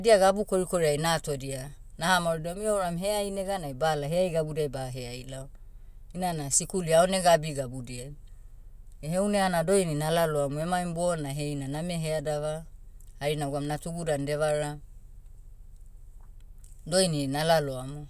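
Listening through this speech recording, nothing stood out as a technical problem at any point.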